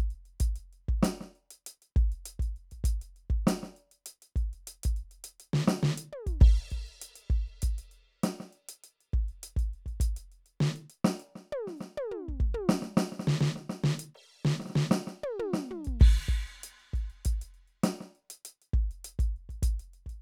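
No faults are audible anywhere in the music, so there is nothing to place on the timeline.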